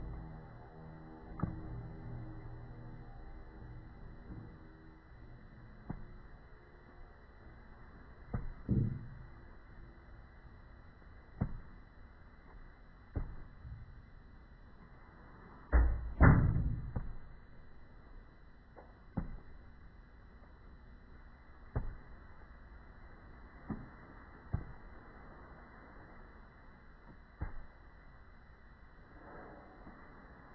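Throughout, the audio is dragged down, playing at 0.363 times normal speed and 17.6 semitones low. This is a wrong sample rate, consistent with 44.1 kHz material played back at 16 kHz.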